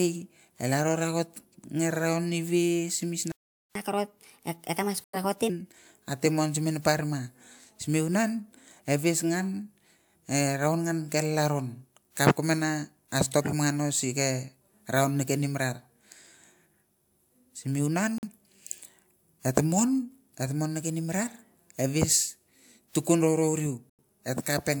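At 3.32 s the speech stops dead for about 0.44 s, until 3.75 s. This playback stall likely comes from the player running short of data.

From 3.75 to 5.50 s, starting at "ate muang", there is catch-up at higher speed. The backlog plays 1.25 times fast, and the pitch rises about four semitones.

At 5.04 s, inside that fast stretch, a corrupt frame is muted. A sudden hole of about 0.13 s fits two rejected frames. Timing holds. The same muting returns at 18.18 to 18.27 s and 23.90 to 24.04 s. Each of those gaps fits three frames.

At 13.31 to 13.52 s a corrupt frame is decoded anyway, across a few frames. Misread data puts a short burst of energy at the wrong frequencies, peaking near about -15 dBFS.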